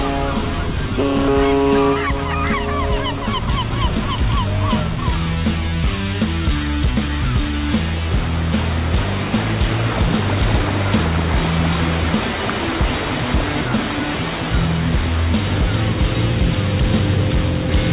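At 1.28 s there is a skip ahead: about a second of audio is simply gone, and the material on either side is butted together with no silence or fill, so it registers as an abrupt jump forward rather than the gap a dropout would leave.

From 3.17 s to 7.53 s a jitter buffer speed-up runs the sound at 108% by repeatedly cutting out pitch-period-sized slices, removing roughly 400 ms in total. It sounds hurried, but unlike a resampling error the pitch stays put, heard through the call path's 4 kHz band limit.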